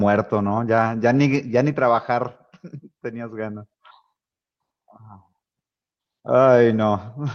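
Right through the speech there's clock drift between sender and receiver: the sender's clock runs about 4% slow, so the receiver's buffer keeps draining. From 0.10 to 7.18 s you get repeated timing corrections, with small pieces repeated to fill in, adding roughly 0.3 s overall. That comes across as faint hiccups and a slightly dragging, uneven tempo.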